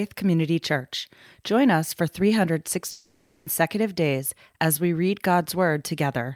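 From 2.91 to 3.47 s the speech smears into a fading buzz, then jumps to "days as we read", 0.55 s lost: likely a long network dropout.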